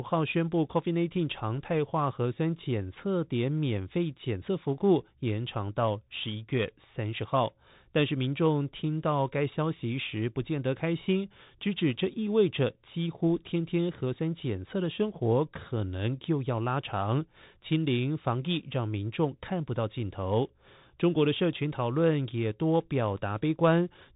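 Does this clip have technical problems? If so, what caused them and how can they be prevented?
Yes. Throughout the speech, the Bluetooth CVSD headset codec is plainly audible. Nothing above 4 kHz survives, which fits a 64 kbps CVSD link. Its one-bit adaptive delta steps lag loud high sounds, causing scratchy sibilants and a granular hiss. Prevent it by recording on the headset's wideband profile or a wired microphone.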